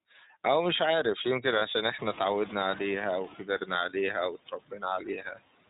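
Throughout, the speech runs through the iLBC codec: nothing above 4 kHz survives, and the voice has a plainly rough, synthetic edge, which fits the 30 ms, 13.33 kbps mode rather than simple band-limiting. Noise suppressor artifacts are also constant: the background is pulled down by about 17 dB between words and swells back under them.

From 1.59 to 1.62 s one lost iLBC frame, about 30 ms, is filled with a repeated pitch cycle. It sounds like a brief buzzy held vowel, and the voice recovers at once with no smearing afterward.

At about 2 s the room noise jumps by about 25 dB. From 1.98 to 3.36 s the noise suppressor is catching up: at first it cuts only about 8 dB, so the noise comes through strongly, then it sinks over roughly 1.4 s. That gradual fall separates it from the constant suppression.

Speech cut by the noise suppressor follows at 3.39–3.7 s (about 10 dB), 4.46–4.83 s (about 15 dB) and 5.0–5.39 s (about 10 dB). 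In each, short stretches of speech are swallowed along with the background. Unlike the frame loss, these sound faint rather than buzzy.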